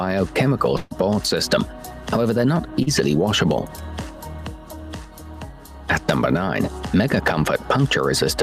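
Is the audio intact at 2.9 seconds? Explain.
No. A short concealed packet loss runs from 2.83 to 2.89 s: 40 ms of audio never reached the decoder in time, so the receiver extended the preceding sound to fill the gap and blended back in, leaving a brief smear or wobble.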